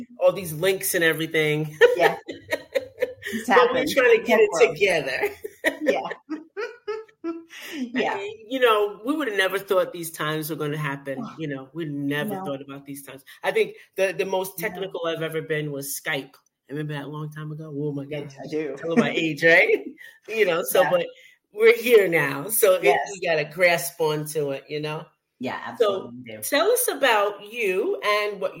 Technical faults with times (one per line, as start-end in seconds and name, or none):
none